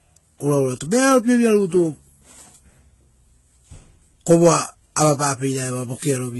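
Transcoding between lossy codecs, throughout: the speech carries layered artefacts with nothing above 11.8 kHz, likely a low-rate HE-AAC encode re-encoded to Vorbis, stacking both codecs' errors.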